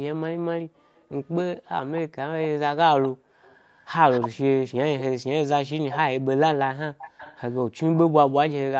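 Speech with an echo leak: a delayed, fainter copy of the voice trails it at 0.96–2.48, 3.03–4.29, 4.99–5.03, 5.9–5.99 and 6.98–7.81 s. It lags by 230 ms early on and 313 ms later, most likely from a loudspeaker end whose echo canceller let residual pickup return.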